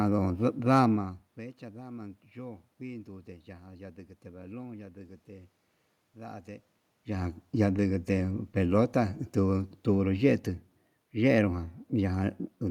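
No technical faults turn up anywhere in this speech recording. What can be heard is ordinary room noise in the background and the level shifting around 1 s and again near 6.5 s as the talker moves relative to the microphone, both part of the recording itself.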